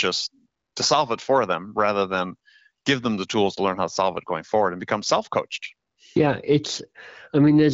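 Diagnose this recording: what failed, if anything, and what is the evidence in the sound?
Nothing failed in this recording.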